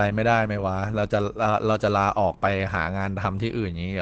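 Throughout, likely Opus compression in its speech mode, fitting a rate near 12 kbps, removes everything above 8.6 kHz, leaving the speech muffled and hoarse.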